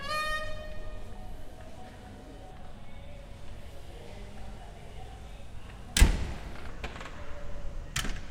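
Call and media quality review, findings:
Section at the wrong speed, 6.68 s to end (8.3 s): sound abruptly drops and drags, slowed to 0.79x with pitch around four semitones lower, both shifting together at the onset. Likely cause: clock or resampling mismatch in the playback or editing path, so that section plays at the wrong rate.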